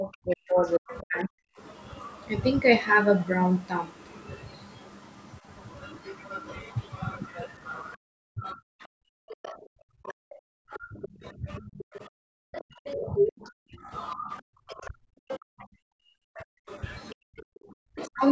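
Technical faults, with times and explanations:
0.0–1.57 s and 7.95–18.23 s, speech suppressed in double talk: the talker's voice dips by up to about 40 dB, in patches totalling about a second in the first stretch and roughly seven seconds in the second. This is likely an echo canceller that could not tell the talker from loudspeaker echo while both sides spoke, so it attenuated everything. On a waveform the envelope collapses in blocks. On a spectrogram the energy thins to near-empty gaps below the 8 kHz ceiling of the call path.
0.66–1.2 s, 8.81–9.55 s, 10.08–10.13 s, 11.02–13.5 s, 14.37–15.36 s, 16.35–16.92 s, other side's voice leaking through: a second voice sits under the talker, likely loudspeaker playback that the echo canceller left in the microphone signal. Most scraps are about 20 dB below the speech, but it rises to about 10 dB below at 14.37 s and to about 5 dB below across 11.02–13.5 s. 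A spectrogram shows a separate set of harmonics whose spacing differs from the talker's.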